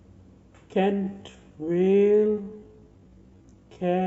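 At 0.90 s the speech turns into a time-stretched section, slowed to about 0.54 times normal pace until the end. Pitch holds, but it drags, likely from stretching software repeating short pieces.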